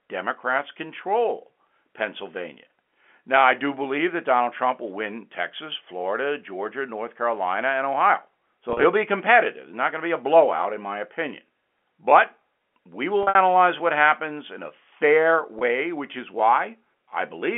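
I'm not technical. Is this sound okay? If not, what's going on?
No. At 8.70–8.84 s, 13.23–13.35 s and 15.59–15.61 s there is packet loss with pitch repetition. Tiny pieces of sound went missing, and the receiver filled each gap by repeating the last bit of tone. That gives a brief held, buzzy sound rather than a clean cut to silence.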